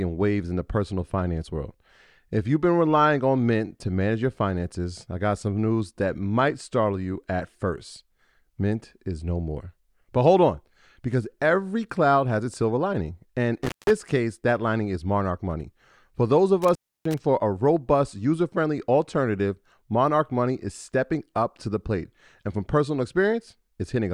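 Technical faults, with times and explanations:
13.63–13.91 s and 16.62–17.18 s, intermittent contact: a loose connection briefly opens, dropping the sound for about 200 ms before "case that lining is" and about 300 ms between "those of" and "for a robust user". The waveform collapses to faint hiss, and the spectrogram shows vertical crackle streaks at each edge.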